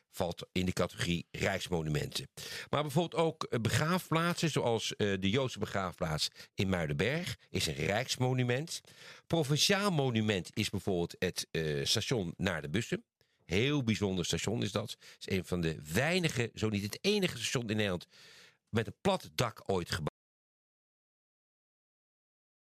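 At 20.09 s the input feed appears to have been lost, likely through a disconnected source or a failed link, while the recording carried on writing silence. The result is an audio dropout to silence: the sound stops abruptly in mid-flow and never returns, leaving about 2.5 s of silence through to the end. No room tone or noise floor remains in that stretch, and whatever was happening there is gone.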